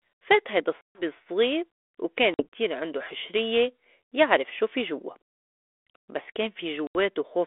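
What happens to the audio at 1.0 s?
Packet loss on an ADPCM call, 0.81 to 1.02 s. About 140 ms drops to silence. The decoder's predictor loses track, so speech resumes slightly distorted before settling.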